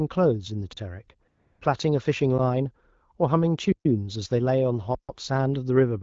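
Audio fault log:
0.73–0.77 s, 3.72–3.85 s, 4.95–5.09 s: underrun with held sample. The output buffer ran dry for about 43 ms, 128 ms and 140 ms, so the waveform freezes flat at its last value and the sound simply stops. Nothing is skipped: playback resumes where it halted, softly rather than with a click. The first gap fits a 1024-sample buffer.
1.27–1.61 s: AMR comfort noise. For 340 ms the phone treated the talker as silent and stopped sending speech frames, and the receiver filled the gap with smooth, steady synthetic noise. The real background drops out and this artificial hiss switches in and out in its place.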